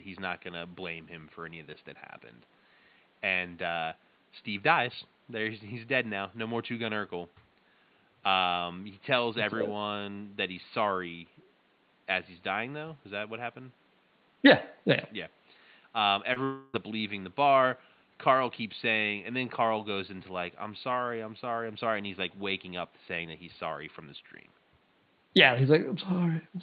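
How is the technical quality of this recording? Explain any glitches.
Two glitches, both packed into about half a second just after the 16-second mark, disturb the speech. Elsewhere the audio carries the slightly band-limited character of a call coded with Opus, with the top end stopping around 12 kHz and quiet room noise sitting about 36 dB below the speech.

At 16.33 to 16.38 s there is a brief smear, a tiny wobble in the sound lasting a few hundredths of a second. This is short concealed packet loss. About 20 ms of the call did not reach the decoder in time, so the receiver extended the preceding sound over the hole for roughly 25 ms, following its pitch or its noise shape, and then blended back into the real signal.

From 16.44 to 16.75 s the speech turns into a stretched, fading buzz-like continuation for about 0.3 s instead of carrying on normally, and it never drops to full silence. 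This was likely a long network dropout. Around 300 ms of audio failed to arrive, and the receiver filled nearly all of it by continuing and fading the last sound. When the real audio resumes, that stretch of speech is simply missing.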